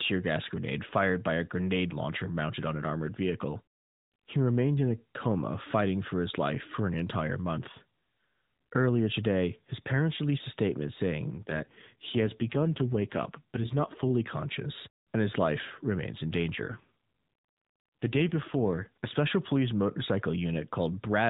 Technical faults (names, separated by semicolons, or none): AMR rate drop